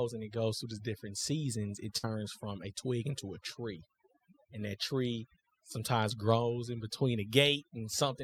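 Overdone noise removal runs the whole way through: the denoiser clamps bands near its noise estimate, leaving a near-silent, twinkly background and taking quiet parts of the voice with it. At 1.97 to 2.13 s there's a burst of packet loss; the receiver stretches the last sound into a fading buzz or hiss for about 54 ms, and roughly 60 ms of speech is simply gone.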